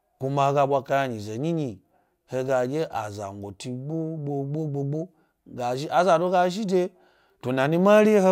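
No dropouts, distortion, glitches or other technical faults can be heard anywhere in the recording.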